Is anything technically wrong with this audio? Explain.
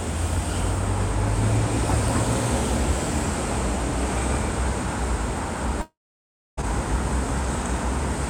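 Yes. From 5.81 to 6.59 s there is a long network dropout, likely caused by packets failing to arrive. The receiver stretches the last sound into a brief fading buzz, then about 0.6 s of silence, and the audio resumes with roughly 0.76 s missing.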